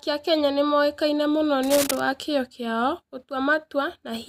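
Right after "nĩ moĩkaine mũno", from about 1.63 to 2.00 s, you get cable scratch noise: dense, ragged scratching sitting just under the speech level, gone by "wa kĩyo kĩao". Likely a worn cable or connector shifting, its contact resistance jumping about.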